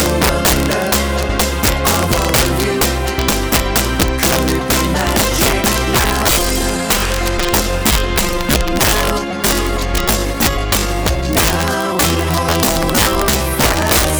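Throughout the clip, the loudest moments break into harsh, violent cracks, far sharper and uglier than ordinary clipping. This is integer overflow: the signal was driven about 4 dB past the largest value the integer format can hold, and instead of being limited, those peaks wrapped around to the opposite extreme. Only a small share of the samples, around one in fifty, exceed the limit, but each one jumps across the full range and produces a crack.

From 5.69 s to the end, the pace abruptly drops to about 0.74 times its earlier speed while the pitch stays unchanged. The slowed audio drags. This is likely a time-stretched section, where software lengthened the audio to fit a target duration by repeating short overlapping pieces rather than resampling. That repetition preserves pitch.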